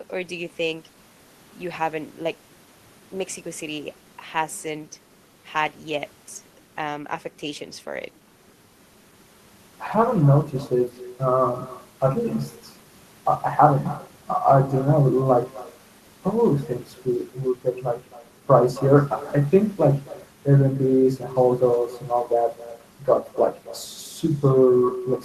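Echo with no canceller runs throughout the speech: the far end's loudspeaker feeds its microphone unchecked, so every phrase returns roughly a third of a second later, about 19 dB quieter, as a thin shadow trailing the original.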